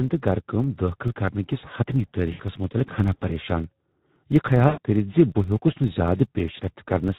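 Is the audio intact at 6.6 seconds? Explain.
No. At 6.6 seconds, as throughout the clip, the speech carries Speex codec damage. Too few bits are left for the excitation, which fits a setting around 11 kbps, so the speech sounds plainly hoarse and noisy. On a spectrogram the harmonics look smeared and grainy.

A filter restarted on every block is also present there. Because the filter starts each block from silence, it leaves a small transient at every block edge, heard as a 25 Hz buzz that rises and falls with the speech level. The waveform shows evenly spaced ticks 40 ms apart, and the spectrogram shows faint vertical stripes at that spacing.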